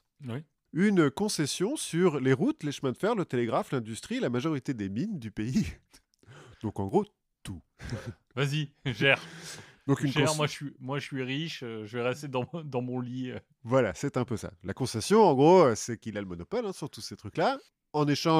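Speech with two bit error spikes. Each is one sharp, broadband tick unrelated to the speech. They fall at 6.89 s, before "gros tout", and 9.99 s, before "une moi je suis". Each peaks at about -29 dBFS. A flipped bit jumps one or two samples by a power of two, then snaps back.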